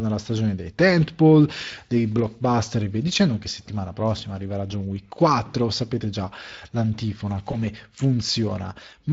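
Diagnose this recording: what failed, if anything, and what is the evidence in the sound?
Speex codec, throughout (codec stage): plainly audible coding roughness across the speech, which fits a CELP coder running at roughly 20 kbps with limited excitation detail.

VoIP packet loss concealed by the speech codec, 7.51–7.59 s, just after "sapete già l'antifona" (network stage): a brief smeared, fading stretch, which fits one lost 20 ms frame extrapolated by the decoder.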